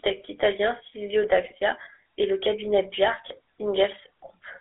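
The whole clip has that GSM full-rate codec sound, a buzzy, gravelly speech roughness from pulse-driven vocal-tract modelling, band-limited to about 300 Hz to 3.7 kHz, consistent with the 13 kbps coder. GSM bit errors hit at 1.44 to 1.53 s and again at 3.28 to 3.39 s, right after "et le cabinet". Corrupted decoder parameters warp the spectrum and level, so the speech briefly squawks and gargles.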